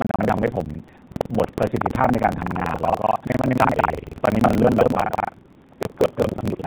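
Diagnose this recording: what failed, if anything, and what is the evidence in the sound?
A steady robotic rattle at about 21.5 Hz runs under the speech for the whole clip. This is buffer tearing at the driver or buffer stage, where writer and hardware pointer cross each period. That rate fits a 2048-sample buffer, with most of each buffer replaying audio from roughly a fifth of a second earlier.

From 4.8 s to the end, the already band-limited AMR-NB speech turns rougher and more synthetic, with no gap or change in bandwidth. This is an AMR rate drop at the network and codec stage. The sound points to a step down from 12.2 kbps to 4.75 kbps.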